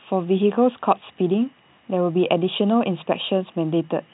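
Nothing goes wrong anywhere in this stretch of speech; it simply has the narrow, boxed-in sound of an ordinary G.711 phone line, with nothing above 3.9 kHz, just as you'd expect from a normal call.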